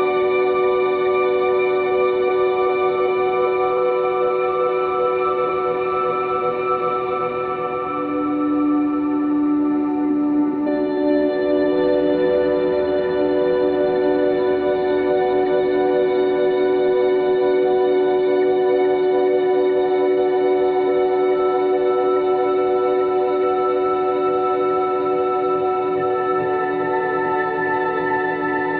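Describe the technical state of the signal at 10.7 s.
At 10.66 to 10.68 s there is damaged data in the compressed stream: corrupted bytes leave the decoder unable to read those frames, so it loses sync and hunts for the next valid frame header. The result is a brief blip lasting about 20 ms.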